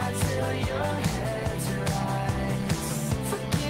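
Nothing goes wrong anywhere in this one; there's simply no technical fault to point to in the audio.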